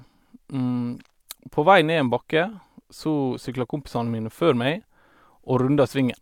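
No technical faults can be heard anywhere in this speech recording. Nothing in it breaks up, drops out or distorts.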